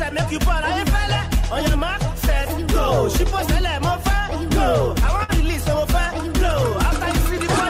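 At 5.23 s a burst of packet loss disrupts about 80 ms of the stream. The receiver extends the last received sound for roughly 50 ms, fading it down, then playback resumes with about 40 ms of audio skipped entirely.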